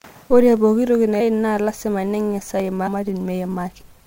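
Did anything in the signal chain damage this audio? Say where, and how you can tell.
Yes. Two dropped samples sound as single sharp clicks at 0.57 s, just before "pooki toki", and at 2.60 s. Each is a thin vertical line in the spectrum. Only a fraction of a millisecond is missing. A driver or buffer glitch is the likely cause.

Compressed frames skipped at 1.19–1.20 s, right after "pooki toki", at 2.86–2.88 s and at 3.80–3.82 s. Each join is a brief smeared blip, not a hard click. The speech jumps ahead by roughly 150, 300 and 100 ms. That fits whole 26.1 ms codec frames being lost in storage or decoding.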